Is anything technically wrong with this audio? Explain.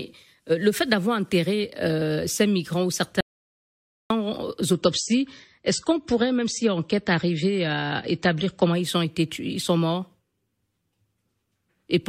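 Yes, there are two faults in this speech clip. From 3.21 to 4.10 s, just after "enterré ces migrants ou", there is an audio dropout to silence lasting about 0.9 s. The gap is silent with no room tone, which likely means the input was lost while the recorder kept writing silence.

From 4.73 to 8.73 s, ending just before "ils ont été ils", the adaptive stream switches to a lower bitrate. Nothing above 8.4 kHz remains, so the treble turns dull, and coding artefacts rise abruptly with no gap. The sound fits a step down from about 128 kbit/s MP3 to 32 kbit/s.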